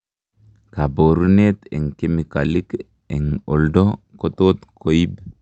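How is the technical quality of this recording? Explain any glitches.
There is one brief glitch in this speech: a short stall from a late packet. It happens over the call path, where the high end rolls off around 8 kHz, consistent with Opus at a moderate bitrate.

From 1.25 to 1.29 s, a sound is held slightly too long, with a faint buzzy smear and nothing skipped. A packet arrived late, the jitter buffer ran dry, and the receiver stretched the last audio by about 22 ms before resuming where it left off.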